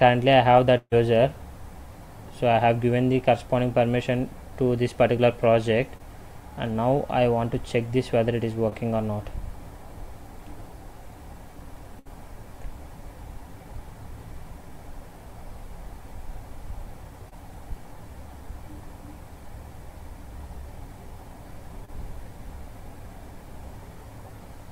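At 0.77 to 0.93 s there is a burst of packet loss. About 140 ms of audio never arrived. The receiver carried the last sound forward and faded it, leaving about 40 ms of silence. The audio then resumes further on. Short concealed packet loss follows at 5.97 s and 8.70 s. Each time about 20 ms is lost. The gap is patched by extending the preceding sound and blending back, which gives a brief smear or wobble. A second burst at 11.99 to 12.07 s loses about 60 ms. A fading continuation covers it before the audio jumps ahead. Two more short concealed losses, again about 20 ms each, fall at 17.29 s and 21.85 s.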